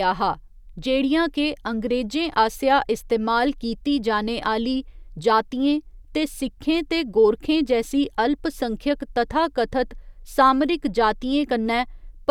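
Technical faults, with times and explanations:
No technical faults heard.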